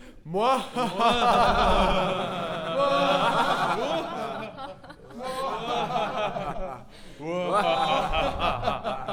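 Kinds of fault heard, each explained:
Doubled audio track: The sound was most likely picked up a second time through a slower path, so a second full-band copy is mixed in about a tenth of a second behind the first and at roughly the same level. From 1.33 s to 3.75 s every event is heard twice in quick succession, like a slapback with no decay or room colour. The copy cuts in and drops out abruptly at those points.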